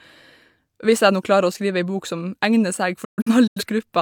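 From 3.04 to 3.63 s the speech breaks into several short silent holes, each cut with a quick 8 ms fade, the longest lasting 128 ms. This is a digital broadcast dropout: the receiver muted corrupted frames, losing 256 ms of programme.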